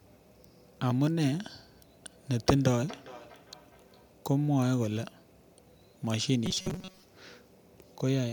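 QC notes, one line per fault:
2.31–4.16 s, feedback echo between two devices. The speech returns as a delayed copy, spaced at a regular interval of roughly 0.4 s. The returning sound peaks at about 21 dB below the direct speech. It sounds like two devices in one room on the same call. One plays what the other's microphone sent, and that microphone picks it up again. Each device's echo canceller only removes its own playback, so this return gets through.
6.46–7.03 s, robotic sound from repeated short buffers. The speech turns into a rigid, metallic buzz with a fixed pitch of 188 Hz. It still roughly tracks the speech underneath. The likely cause is fresh audio arriving too seldom, with the software looping the last short slice to fill the gap. A 188 Hz pitch fits a repeated slice about 5.3 ms long. Most of the real audio in this stretch is skipped and replaced by those repeats.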